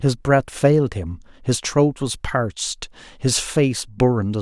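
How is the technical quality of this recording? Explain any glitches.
No glitches can be heard anywhere in the recording; the speech signal stays continuous and stable throughout, with no technical faults to explain.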